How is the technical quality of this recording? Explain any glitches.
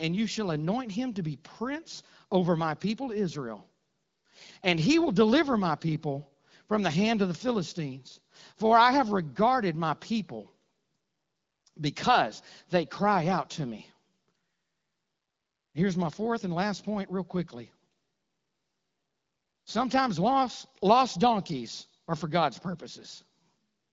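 No glitches stand out anywhere in the recording. The sound has the narrowed top end of an AMR wideband (HD Voice) codec, with nothing above about 7.6 kHz and only light coding texture, which fits a rate around 12.65 kbit/s.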